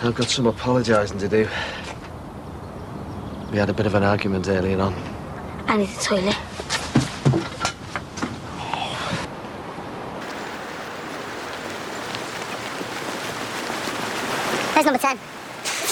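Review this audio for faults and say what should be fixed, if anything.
From 10.21 s to the end, there's a section at the wrong speed: everything suddenly runs 1.63 times too fast, so the sound gets hurried and jumps up about ten semitones in pitch. The likely cause is that this stretch was played or rendered against the wrong clock rate. To prevent it, make sure every segment's sample rate matches the session clock before joining or exporting.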